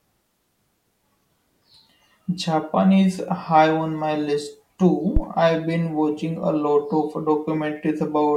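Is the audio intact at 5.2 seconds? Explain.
No. A phantom power thump hits from 5.17 to 5.22 s. Switching the supply on or off on the live input sends a voltage step through the coupling capacitors, so the speech is struck by a deep thump peaking near about −5 dBFS that dies away within roughly 12 ms.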